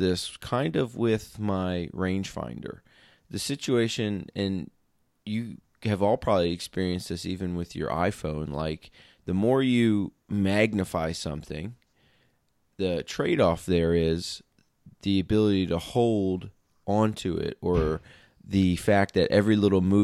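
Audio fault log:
Nothing to flag in this speech recording; no faults turned up anywhere in it.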